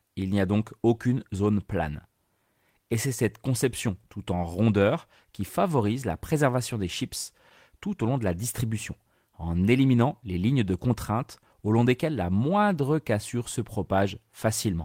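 No technical faults can be heard anywhere in this speech recording. There is no moment that needs a time or an explanation of something going wrong.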